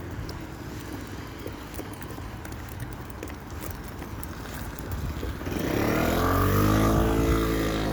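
Sounds, with no technical faults to hear.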